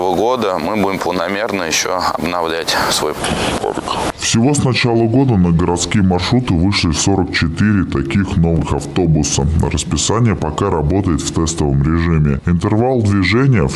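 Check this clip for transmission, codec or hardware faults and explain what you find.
There is one fault, a wrong sample rate. From 3.19 s to the end, the audio plays at 0.726 times its proper speed. Nothing resamples it, so pitch falls with speed, by 5.55 semitones. Everything sounds low and dragged. The ratio fits 44.1 kHz material played at 32 kHz.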